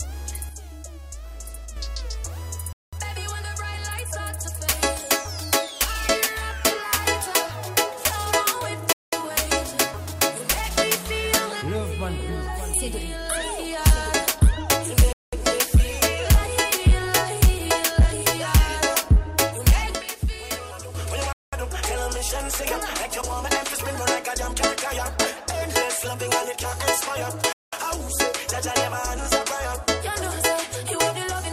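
A gain setting was likely applied without a ramp from 0.49 to 1.77 s, so the level drops by about 6 dB in a single step; sound and background noise fall together, then return just as abruptly.

From 2.73 to 2.93 s comes the first gap between chunks. The audio is being delivered in 6-second pieces, leaving a 200 ms hole with hard edges. Nothing is lost, but the flow breaks. The same gap recurs at 8.93 and 15.13 s.

The sudden gain jump returns from 19.95 to 20.95 s, this time a drop of about 9 dB, again instantaneous at both edges.

Further 200 ms gaps follow at 21.33 and 27.53 s, keeping the regular 6.2-second rhythm of chunk plus silence.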